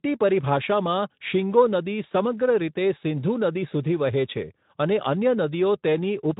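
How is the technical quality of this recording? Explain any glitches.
No glitches turn up anywhere in the recording. The speech has the character of a Speex codec at a middling setting, with only light coloration and none of the hoarse or robotic quality of its lower settings.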